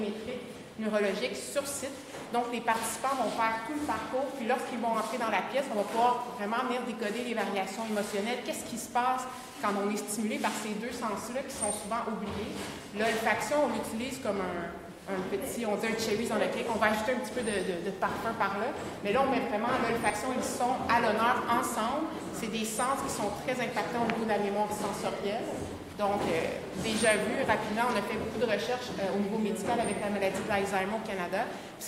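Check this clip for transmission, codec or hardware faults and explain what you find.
Two brief faults turn up. At 20.1 s and 26.23 s, a small skip forward, roughly 20 ms and 10 ms missing: likely a dropped buffer (overrun), samples overwritten before being read.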